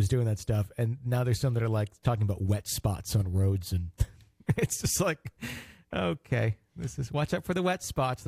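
No technical faults can be heard anywhere here.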